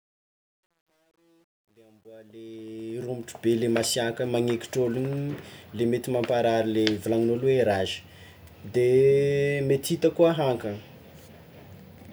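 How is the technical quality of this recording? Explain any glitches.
The recording has one clear flaw, confined to its opening fade-in. From 0.0 to 3.47 s, truncation distortion on a fade: the fade stage drops low bits without dither, consistent with about 11-bit resolution, so the quietest part, worst up to 2.48 s, turns gritty.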